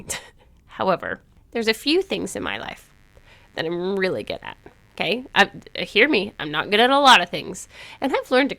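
From 1.97 s to the end of the clip, a mains buzz sits under the speech: a steady, raspy drone built on 50 Hz. Sharp switching spikes, arriving twice per mains cycle, leak in from a dimmer, rectifier or unshielded run, spraying harmonics up into the kilohertz range. It lies roughly 40 dB below the speech. A spectrogram shows a comb of evenly spaced horizontal lines at 50 Hz multiples starting at 1.97 s, and a zoomed waveform shows small regular spikes 10 ms apart.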